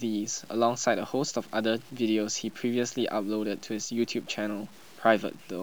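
From start to finish, the speech carries grainy distortion that tracks the signal, roughest on quiet syllables and decaying tails, with error only around 30 dB below the level. This is likely low bit depth without dither, consistent with truncation to 8 bits.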